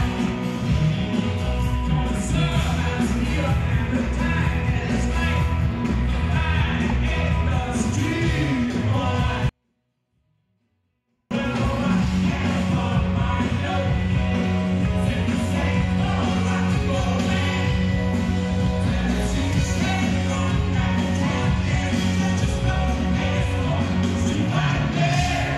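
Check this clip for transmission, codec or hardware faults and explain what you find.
There's one fault, a 24-bit alignment error that leaves the sound far too quiet. From 9.49 to 11.31 s the level drops by about 48 dB in an instant, to near silence, then snaps back. The 24-bit samples were sitting in the low bytes of 32-bit words but got read as full 32-bit integers, so every value lands 8 bits too low. The waveform stays clean, just almost inaudible.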